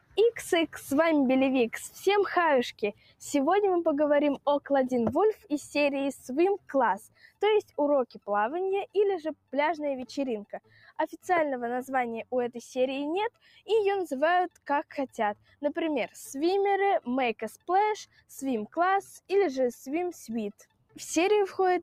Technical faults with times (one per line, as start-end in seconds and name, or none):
0.00-21.83 noise suppressor applied to music or sounds
0.00-0.75 sound cut by the noise suppressor
2.72-3.22 sound cut by the noise suppressor
4.38-5.50 sound cut by the noise suppressor
6.58-9.53 sound cut by the noise suppressor
10.45-11.26 sound cut by the noise suppressor
13.30-15.62 sound cut by the noise suppressor
17.57-19.30 sound cut by the noise suppressor
20.52-21.83 sound cut by the noise suppressor